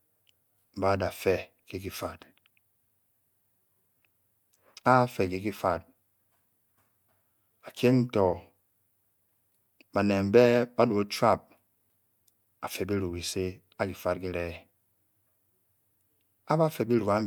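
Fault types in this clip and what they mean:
No technical faults can be heard anywhere in the speech recording; the signal stays continuous and steady throughout.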